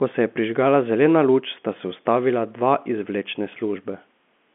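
Speech over G.711 mu-law telephone coding at 64 kbps, band-limited to roughly 200 Hz to 3.4 kHz with nothing above 3.7 kHz and at most faint coding damage, and no technical fault anywhere in it.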